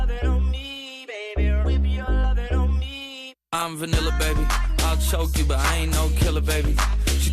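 No technical faults are audible.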